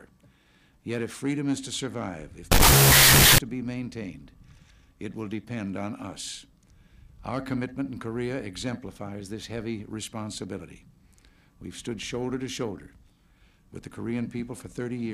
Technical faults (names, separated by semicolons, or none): wrong sample width